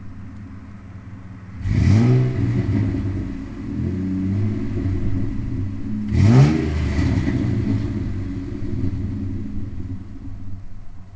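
No technical faults can be heard in this audio.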